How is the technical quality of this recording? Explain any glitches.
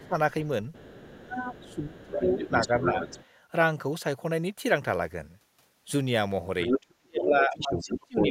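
The recording is compromised by echo-control problems: the other side of the call leaks through, and the talker's speech is pushed down while both sides talk.

Other side's voice leaking through occurs at 0.03–0.08 s, faintly, at 0.73–3.25 s about 10 dB under the talker, and at 6.62–8.3 s at roughly equal level. It is likely residual loudspeaker echo the canceller failed to subtract.

Speech suppressed in double talk occurs at 0.0–0.15 s with a dip of roughly 15 dB, at 0.91–3.02 s with a dip of about 20 dB, and from 7.03 s to the end with a dip of about 25 dB. The talker dips, likely because the canceller attenuated everything during overlap.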